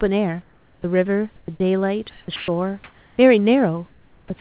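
From 0.42 to 0.84 s the real room background gives way to comfort noise: a flat, featureless hiss about 9 dB quieter than the room tone around it. The sender has likely stopped transmitting in the pause, and the receiver filled it with synthetic noise.

Between 1.36 and 1.6 s the sound is chopped by the voice detector. About 160 ms goes missing in pieces as the sender likely flips between sending and muting, so the sound stutters.

From 2.1 to 2.48 s comfort noise takes over again. Inside that stretch, from 2.36 to 2.48 s, the voice detector drops sound: roughly 120 ms of quiet sound was likely taken for background, so it's replaced by steady noise rather than heard.

From 2.84 to 3.18 s there's more comfort noise. This time it matches the room level, but the texture is smoother and more uniform than the real background.

From 3.88 to 4.3 s comfort noise fills the gap, about 4 dB down. 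The onset is then clipped by the voice detector at 4.28 to 4.30 s. The first 20 ms or so was likely not sent, so the sound starts abruptly.

Throughout, nothing comes through above 4 kHz, which fits a narrowband G.711-style call codec. The genuine room noise sits about 38 dB below the speech.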